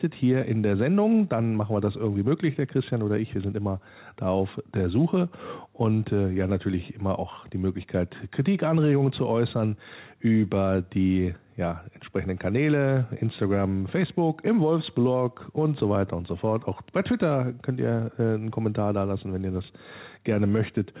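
Nothing stood out on listening to the speech in this recording.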